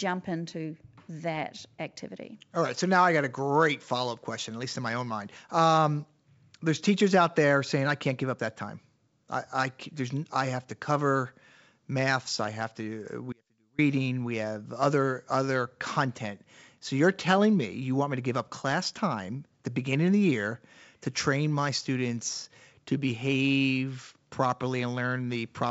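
At 13.33 s, right after "maths I have to", the speech falls away for about 0.46 s. That's an audio dropout to a faint residue. The gap holds only a faint trace about 35 dB down, so the path likely stayed live while the signal was lost, and it snaps back at 13.78 s. The G.722 wideband coding stays clean through it.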